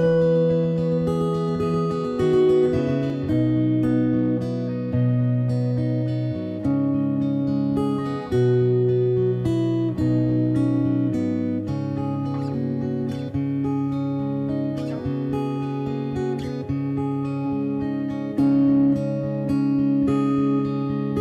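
From the very start until about 3.1 s, every sound is followed by a second, identical copy trailing roughly 150 ms behind and about 5 dB quieter, giving a flat, stuttering slap with no decay or room colour; at 3.1 s the copy drops out abruptly. This is a doubled audio track, likely caused by the signal being picked up a second time through a slower path, or by an edit leaving two copies out of step.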